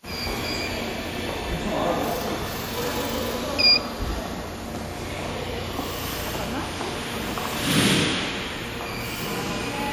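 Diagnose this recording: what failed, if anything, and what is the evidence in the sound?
The codec stage shows damage throughout: a ringing, washy quality with hiss that swells and fades with the sound, likely from WMA compression. Quantisation noise smeared over long transform blocks, at a level that fits roughly 48 kbps, causes it. Unlike low-pass filtering, content still reaches 20.1 kHz.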